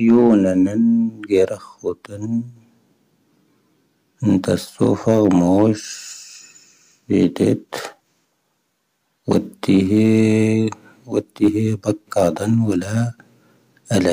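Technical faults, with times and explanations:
0.08–0.38 s, 4.32–5.64 s, 7.15–7.52 s, 9.31–10.42 s and 11.19–11.48 s, hard clipping: peaks overdriven by about 2 dB (about 3 dB at 4.32 s) are cut flat, giving crackle. The waveform shows squared-off tops, and the spectrogram shows harmonic smears reaching high up.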